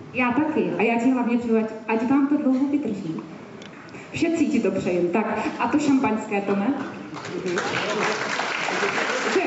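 No technical fault can be heard anywhere in this audio. There is nothing here to locate or explain.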